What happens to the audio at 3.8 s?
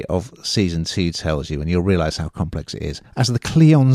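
At 3.8 s the speech runs on cleanly, with no dropout, click, distortion or other break in the signal.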